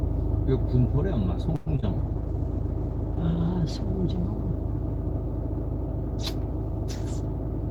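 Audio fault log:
1.55–1.68 s, call audio freeze: The sound stalls and the last moment is stretched into a fading buzz or hiss for about 108 ms, then the audio resumes exactly where it left off, with nothing skipped. That points to a likely delivery hold-up that drained the jitter buffer, so everything after this point plays about 108 ms later. Unlike concealed packet loss, the filler is inserted rather than covering a hole, and no content goes missing.
1.76–1.84 s, short concealed packet loss: Two back-to-back 20 ms pieces of audio never reached the decoder, at 1.76 s and 1.80 s. The receiver covered each with roughly 20 ms of synthesised continuation of the preceding sound, blended back into the real signal, so this stretch comes across as a quick smear or wobble. Unlike the freeze just before it, the timing does not shift here. The original material in those two slots is gone, replaced by a guess.
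1.99–5.89 s, call bitrate drop: The encoder's rate falls from 32 kbps to 14 kbps and stays at the lowest setting for about 1.6 s before recovering. With far fewer bits, the sound is coded coarsely and the top end is trimmed, so it turns rough, watery or muffled for close to four seconds. This sets it apart from the two faults before it. It is a sustained change in tone quality, without any interruption or smear.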